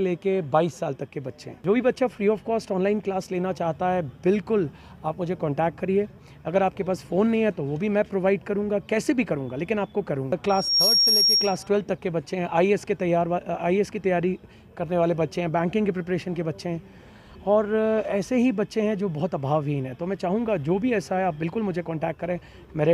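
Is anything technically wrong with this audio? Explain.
Yes. From 10.49 to 11.68 s there is loudspeaker feedback squeal: a microphone picks up its own loudspeaker, and around 5.6 kHz the loop gain exceeds one. A piercing tone swells within about a third of a second, ending up roughly 5 dB above the program.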